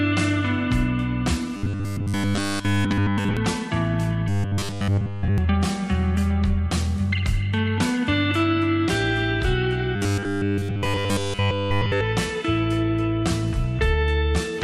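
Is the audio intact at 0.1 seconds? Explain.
Yes, at 0.1 seconds the audio is intact, with no dropout, click, distortion or other fault to be heard at that moment.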